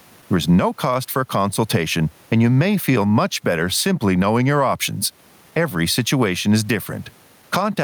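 Gain pumping runs throughout. The background swells between phrases and ducks under louder speech, by around ten decibels. Excessive gain feeding a fast limiter is the likely cause.

Clock drift between sender and receiver is also present throughout. The sender's clock runs about two percent slow. The receiver's buffer keeps draining.

Repeated timing corrections follow from 0.51 s to 7.43 s. The receiver repeats small pieces, playing at 98% speed and adding around 150 ms. This gives slight hiccups and an uneven tempo.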